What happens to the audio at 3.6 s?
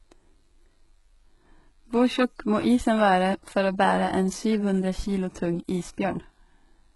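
HE-AAC compression at 3.6 s, as throughout: the treble sounds rebuilt, gritty and lispy on s sounds, stopping near 11.5 kHz. The cause is likely spectral band replication copying lower bands upward, consistent with a very low bitrate around 12 kbps.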